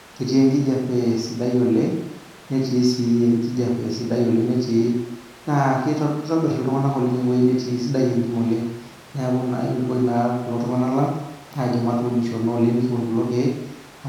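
No technical faults can be heard anywhere in the speech, so there is nothing to describe in time order.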